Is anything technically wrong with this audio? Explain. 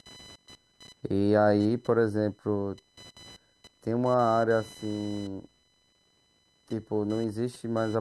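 Yes. Computer activity noise runs through the whole speech recording. Changing load from the processor, graphics card or mouse pulls current through the ground the audio circuit shares, and the shifting ground voltage leaks into the signal. It comes through as a chirping, scratchy buzz pulsing at around 1 kHz, roughly 25 dB below the speech. Unlike mains hum, which is a steady low tone at a fixed frequency, this noise fluctuates with the computer's activity rather than with the speech.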